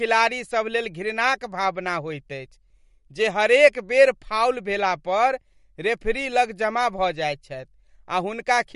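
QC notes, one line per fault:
throughout, MP3 compression: Nothing is heard above 11.2 kHz, and the speech sounds watery and swirly. The likely cause is a starved MP3 encode, one that fits roughly 49 kbps. It cut the treble and let weak frequency lines flicker between frames.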